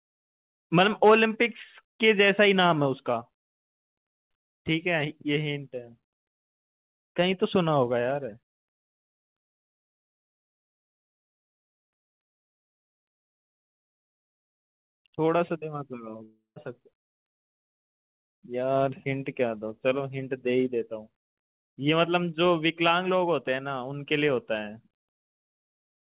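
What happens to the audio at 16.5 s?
At 16.5 s the sound breaks up in what is likely a long network dropout, running from 16.24 to 16.58 s. About 320 ms of audio never arrives. The receiver fills the gap by extending the last sound, which turns into a fading buzz or hiss. Roughly the final 130 ms is plain silence. The sound then resumes at 16.58 s, and the lost portion is gone for good.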